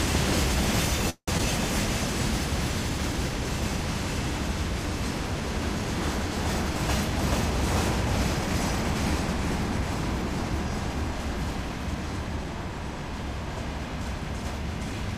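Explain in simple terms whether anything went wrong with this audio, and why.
Around 1.10 to 1.30 s there's a call audio freeze: the sound stalls into a fading buzz and a short silence, likely from packets held up in transit, then carries on where it stopped.

Right after, at 1.38 to 1.41 s, comes a skip ahead. Roughly 70 ms of audio drops out, and the two sides are stitched almost directly together.

From 2.90 to 3.70 s there's a jitter buffer slow-down. Tiny bits get repeated, adding 37 ms, so the audio plays at 96% speed without any pitch change.

Later, between 9.38 and 12.45 s, a jitter buffer speed-up trims around 150 ms in small pieces. That runs things at 105% speed and sounds slightly hurried.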